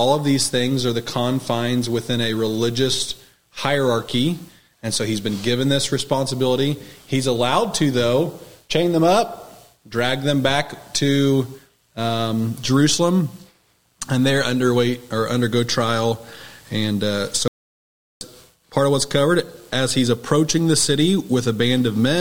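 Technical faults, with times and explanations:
17.48 to 18.21 s, audio dropout to silence: the sound stops mid-flow for 0.73 s into silence without room tone, likely a lost input.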